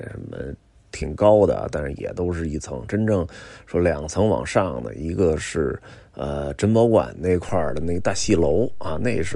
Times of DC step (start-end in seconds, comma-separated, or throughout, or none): 7.49-9.35